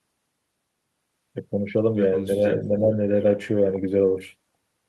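The speech briefly dips, slightly from 2.37 to 2.42 s and more deeply, by roughly 10 dB, from 2.69 to 2.94 s. This is speech suppressed in double talk, likely an echo canceller turning the talker down along with the far side.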